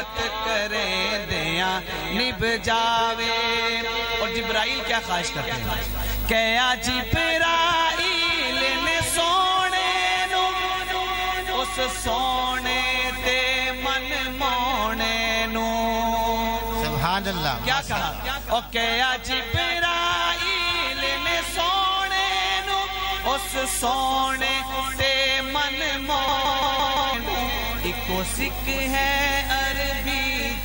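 At 26.28 s a system hang loop repeats one 0.17 s slice exactly, five times at about 5.86 Hz until 27.14 s. The identical repeats, unlike a varied glitch, point to an 8192-sample ring buffer replaying while roughly a second is lost.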